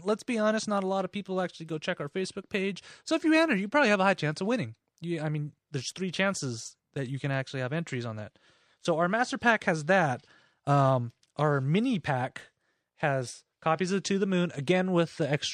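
Nothing in the speech stood out as a technical problem on listening.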